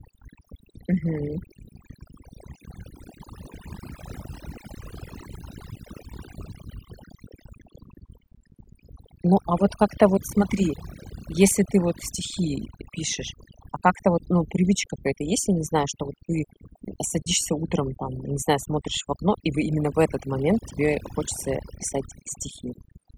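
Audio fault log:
Throughout, overdone noise removal: aggressive suppression gates bands near the noise floor, leaving near-silent gaps with twinkling specks and quiet parts of the voice cut away.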